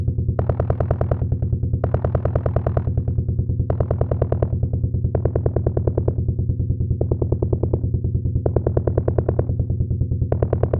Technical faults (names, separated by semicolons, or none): none